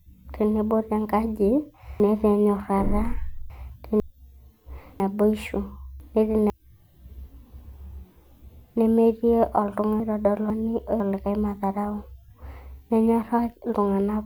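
Chunks out of order: half-second blocks played late, behind the ones that should follow, by three chunks at 2.0–4.0 s just after "tenebo tenkaji", two at 5.0–6.5 s and one at 10.0–11.0 s, jumbling the speech.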